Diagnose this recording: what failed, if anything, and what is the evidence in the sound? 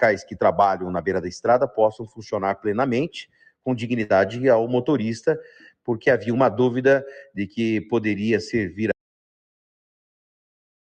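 The level breathes throughout, with sustained material and decays sinking while onsets punch through, a swing of about 5 dB. This is call processing: a noise suppressor applied to music or sounds, tuned for speech and left enabled. It treats steady tones, ambience and reverb tails as noise to be attenuated, so held content thins and pumps while transients pass largely untouched.

Three passages drop much further: 1.93 to 2.2 s (about 18 dB down), 3.25 to 3.66 s (about 21 dB), and 5.48 to 5.88 s (about 18 dB). Each dip lasts roughly a third of a second. These are sounds cut by the noise suppressor, still in the call-processing stage. Its gain estimate classified these stretches as noise and clamped them hard, eating into their sustain and decay.

At 4.03 to 4.11 s the sound briefly smears into a continued, fading copy of itself, then resumes a little further along. That is a burst of packet loss on the network path. 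About 57 ms was filled by the receiver's concealment, which extended the last good audio and faded it down, and about 60 ms of the original signal never arrived, so the material in between is missing.

From 8.92 s to the end the signal cuts to silence, with no room tone or residual noise, and never returns. This is an audio dropout to silence. The likely cause is loss of the input at the capture side, such as a disconnected device, a failed link or an unintended mute, while the recorder or encoder kept writing silence.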